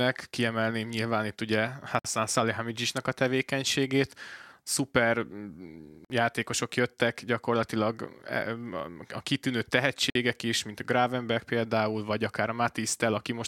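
Speech, broken three times by a gap at a join of encoded pieces. Short silences open at 1.99 s, 6.05 s and 10.10 s, each about 53 to 55 ms long, recurring every 4.0 s. Their edges are smeared by the codec. After each gap the speech resumes exactly where it stopped. The segments were encoded separately and then butted together untrimmed. Each encoder's start-up delay and final-frame padding stayed in as silence.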